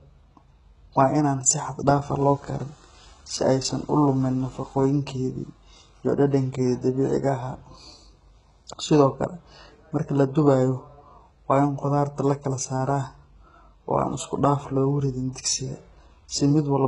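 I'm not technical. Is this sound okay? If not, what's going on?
No. The speech was likely squeezed by HE-AAC compression, which keeps only the lower sounds and invents the treble by copying it upward. Throughout, nothing exists above about 11.1 kHz, and the damage is heavy: s sounds come out gritty, metallic or lispy.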